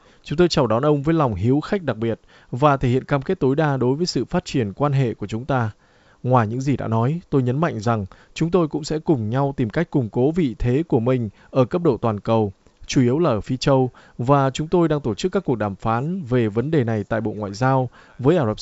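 Speech over G.722 wideband coding; no technical faults.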